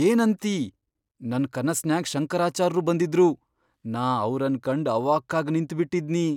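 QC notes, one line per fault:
No faults found in the speech. Nothing here needs a timed entry.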